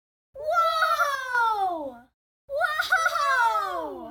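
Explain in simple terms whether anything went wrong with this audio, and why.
A brief fault, most likely one channel dropping out. For about a fifth of a second, from 1.15 to 1.35 s, one side of the stereo signal seems to have gone missing. When the two sides are combined into one, the sound shared by both suddenly drops to about half its strength, so the audio briefly dips in loudness. Anything that was only on the missing side vanishes entirely until the channel returns.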